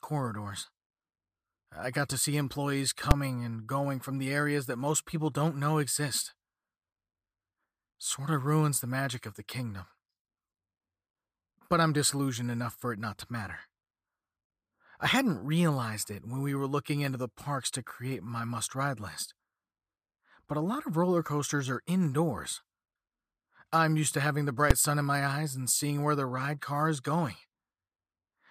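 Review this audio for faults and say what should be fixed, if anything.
Two sharp bangs at 3.11 s and 24.71 s, both invalid numbers at full scale. A calculation blew up, pinning the output at full scale for about 5 ms. Clamp or sanitise non-finite values before output so a bad calculation can't reach the speakers.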